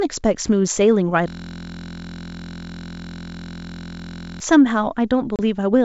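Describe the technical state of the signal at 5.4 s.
Packet loss on an ADPCM call occurs from 5.36 to 5.40 s. About 30 ms, a few packets' worth, drops to silence with hard edges. The decoder's adaptive predictor and step size then lose sync with the sender's, so the sound returns unsteady before settling.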